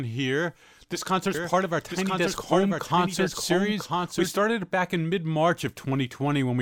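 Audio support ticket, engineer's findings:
Doubled audio track, 1.34 to 4.30 s: second copy of the speech about one second behind, around 5 dB quieter, full-band and dry with no decay or room colour. Starts and stops abruptly; begins just before "it back in mid". Fixed offset and clean copy point to a likely duplicate feed, either a slower secondary capture path summed into the mix or an edit holding two misaligned copies.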